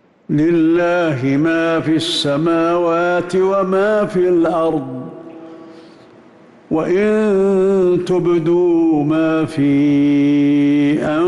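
No technical faults can be heard anywhere here.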